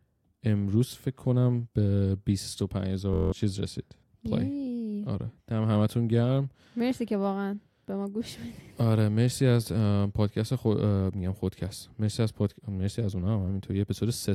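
From 3.14 s to 3.32 s the speech turns into a rough buzz at about 43 Hz, as one 23 ms sliver repeats eight times. This is a system hang loop: the system stalled while the audio hardware replayed its ring buffer, which fits a 1024-sample buffer, dropping roughly a fifth of a second.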